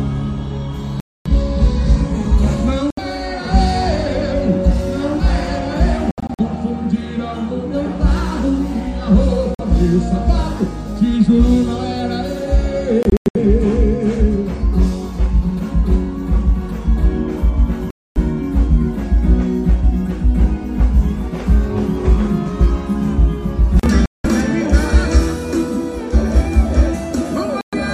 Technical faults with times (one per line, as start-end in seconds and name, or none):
1.00-1.27 Bluetooth dropout
2.90-2.99 Bluetooth dropout
6.11-6.41 Bluetooth dropout
9.55-9.60 Bluetooth dropout
13.03-13.36 Bluetooth dropout
17.90-18.17 Bluetooth dropout
24.06-24.26 Bluetooth dropout
27.61-27.74 Bluetooth dropout